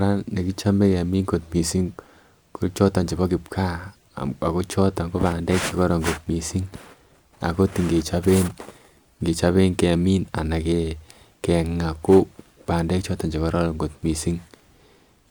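No dropouts, clicks, distortion, level jumps or timing glitches are audible anywhere in the speech.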